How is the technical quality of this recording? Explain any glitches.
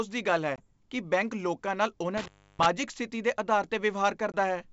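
Three glitches interrupt this speech recording: two short dropouts from packet loss on an ADPCM call and one longer cut from an intermittent contact. The wideband telephone sound is clean up to about 7 kHz, with no extra noise in the lower band, which fits G.722 wideband coding at its full 64 kbit/s rate.

At 0.56 to 0.65 s and again at 4.32 to 4.36 s, the speech drops into a hard-edged silent gap and comes back slightly distorted. The gap is 20 ms, about one packet's worth of audio. The decoder filled it with silence. Because ADPCM codes each sample relative to its own running prediction and step size, the receiver's state no longer matched the sender's, so the resumed sound is briefly distorted before it settles.

From 2.17 to 2.66 s there is an intermittent contact. The sound cuts out for about 316 ms, with crackle at the moment it breaks and again when it returns, and faint hiss is left in between. 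A loose plug or cable opened the signal path for that stretch. The crackle comes from the contact scraping as it separates and then reconnects.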